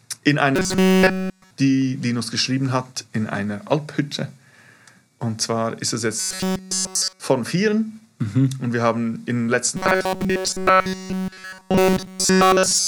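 Robotic sound from repeated short buffers appears from 0.56 to 1.51 s, from 6.19 to 7.20 s, and from 9.77 s to the end of the clip. In each stretch the audio collapses into a rigid metallic buzz at 188 Hz, with essentially all of it made of repeats. The likely cause is a starved playback path looping one segment of about 5.3 ms, which fits that pitch, while the incoming audio is skipped.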